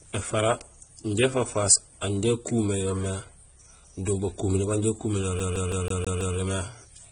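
Across the whole clip the speech is band-limited, with nothing above 9.7 kHz, and it carries two layers of coding damage at once: a smeared, swirly high band alongside a second, grainier haze of quantisation noise. That combination points to transcoding between lossy codecs, likely a low-rate HE-AAC stage re-encoded as AAC-LC at a modest rate. A single encode would leave one consistent artefact signature, not two stacked together under one fixed cut-off.

From 5.39 s to 6.37 s the audio falls into the fault of a CD stuck on one turn. The same 0.16 s slice of speech plays six times in a row, with a brief mute at every jump back. That loop is what one disc rotation lasts at that point, so the stutter is rapid and perfectly regular. Network packet-loss repeats would be uneven in length and spacing, and they would not return to the identical slice each time.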